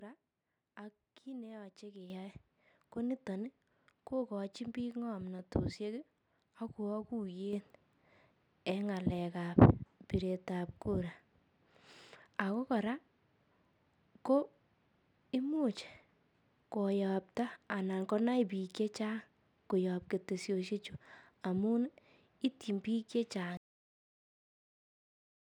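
At 2.1 s and again at 7.53 s the microphone volume stepped up as the input gain was raised automatically, so voice and background together jump by about 9 dB, then about 6 dB. At 23.57 s the final buffers were never written, giving a cut-off end: the speech stops mid-sound and drops straight to digital silence without any decay.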